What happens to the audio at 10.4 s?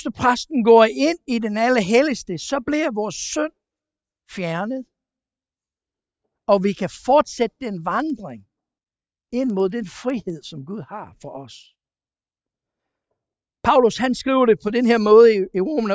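At 10.4 s the resampler-restarted-on-every-block fault ends. From 7.9 s, each 100 ms block was converted separately, which fits a 44.1 kHz to 16 kHz conversion, leaving errors at block edges. These are heard as ticks at 10 Hz during the speech. A spectrogram shows faint vertical broadband lines every 100 ms, and the waveform shows small steps at the block joins.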